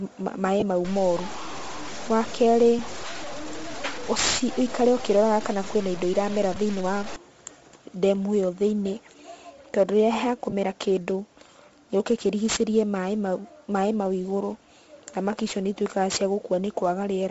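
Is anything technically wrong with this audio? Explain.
Yes. Four kinds of fault are audible.

Sample clock jitter runs through the whole clip. Timing error of roughly 10 microseconds turns steep waveform slopes into hiss that swells on loud, bright speech and vanishes in pauses, unlike steady background noise.

Bluetooth LC3 compression is present throughout. The breathy, grainy top end and noise-filled highs fit LC3 at about 32 kbps. The noise-filled highs separate it from jitter's level-tracking hiss.

Lost LE Audio frames occur at 0.60–0.62 s, 2.79 s, 6.55 s and 10.50–10.53 s. The decoder repeats the last spectrum with scrambled phase, so each gap becomes a brief noisy smear rather than a click or hard dropout. The longest gaps fit about three lost 7.5 ms frames.

Low bit depth without dither affects 0.85–7.16 s. The grit rises as the sound gets quieter, and soft tails sputter or drop out, which points to truncation to about 5 bits. 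Unlike jitter, it worsens on quiet passages. Undithered truncation is the likely cause.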